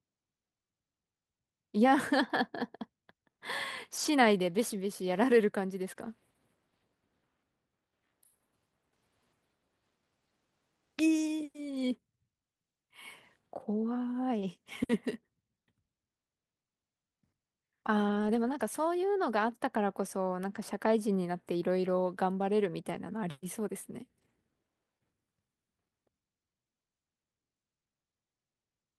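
At 3.97 to 4.07 s comes the first lost packet rebuilt from error correction. Packets went missing, but later packets carried low-bitrate copies of them. The decoder played those copies, so there is no gap. The rebuilt stretch sounds rougher and noisier than the audio around it.

At 5.93 to 5.97 s there is a short concealed packet loss. Part of the speech never arrived in time. The receiver stretched the preceding sound to fill the hole and then blended back. It is heard as a brief smear or wobble.

From 5.97 to 6.11 s, error-correction copies take over again, giving the same grainy patch. The same fault returns at 11.71 to 11.93 s, 13.71 to 13.73 s, 18.11 to 18.61 s, 19.81 to 19.83 s and 22.89 to 22.95 s. The longest patch, at 18.11 s, points to a run of about a dozen lost packets, and the roughness lasts longest there.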